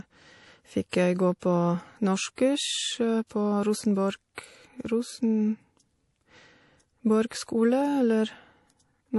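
MP3 compression, throughout: nothing is heard above 11.5 kHz and the speech has a plainly audible watery, swirly texture, likely from a low-bitrate MP3 encode, which fits roughly 48 kbps. Pre-echo at 0.89 s (just before "jeg gå på"), 1.40 s (just after "jeg gå"), 2.36, 3.27 and 4.35 s: a short hiss runs 25 to 40 ms ahead of sharp attacks, softening them, because quantisation noise is spread across the whole transform block.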